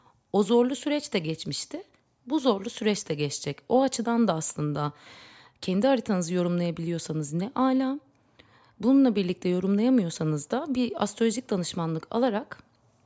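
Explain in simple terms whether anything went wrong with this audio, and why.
Nothing went wrong with this audio; there are no faults to explain.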